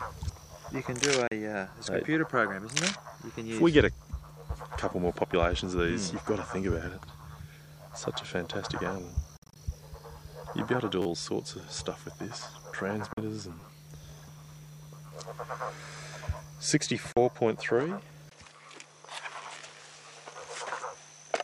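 At 1.27 s the sound cuts out for about 40 ms, likely a Bluetooth dropout in which packets missed their slot and the headphones went silent. The waveform shows a flat gap, and the spectrogram a clean vertical band of nothing. Playback resumes further along, as if it had run on through the hole.

At 6.73 s a repeated buffer appears: a 10 ms slice plays twice, joined hard, giving a tiny click. On the waveform the same short shape sits side by side, with a discontinuity at the seam.

From 9.37 to 9.56 s a longer, broken dropout hits, about 133 ms missing in pieces spread over roughly 190 ms, the longest gap about 53 ms. It sounds like a rapid sputter, and shows as several separate blank slots in the spectrogram.

At 11.02–11.06 s the 10 ms buffer repeats four extra times, a brief buzzy stutter seen as a row of identical cycles. Another 40 ms dropout follows at 13.13–13.18 s, then at 13.60–13.62 s the buffer sounds two extra times, a short rattle. 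A further 40 ms dropout lands at 17.12–17.17 s.

From 18.29 s to the end, the input switched to a poorer device, likely a different microphone or a headset profile. A 20 ms silence marks the change, then the tone turns duller with nothing above 11.4 kHz. The loudness stays about the same, but a new noise floor sits about 45 dB below the signal. The spectrogram shows the top band cut off flat from that point on.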